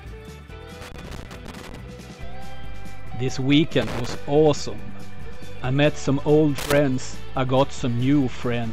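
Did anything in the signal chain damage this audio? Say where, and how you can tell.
Yes, in the analogue wiring: loose connector crackle appears three times, from 0.81 to 1.76 s, 3.82 to 4.15 s and 6.58 to 6.78 s. Each burst is an irregular scratching that chops the sound as a worn or dirty contact opens and closes while it moves. On the waveform the signal breaks into ragged gaps with sharp spikes. A spectrogram shows scattered broadband vertical streaks clustered in those three spans, unlike steady noise.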